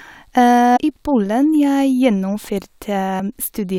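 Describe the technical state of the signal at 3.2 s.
Damaged data in the compressed stream at 3.19 s corrupts a frame, so the decoder loses sync and hunts for the next header, leaving a brief chirp, squawk, click or short hole in the speech.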